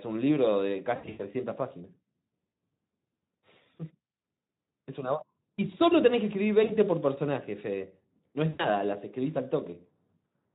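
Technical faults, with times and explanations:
0.95–1.25 s, 2.49–2.53 s, 6.63–6.75 s, 8.49–8.69 s: VoIP packet loss concealed by the speech codec. Speech smears into a buzzy tone or coloured noise that fades as the Speex decoder extrapolates missing audio from its last pitch and filter. Gaps total about 200 ms, 40 ms, 60 ms and 100 ms, with weakness lingering after each.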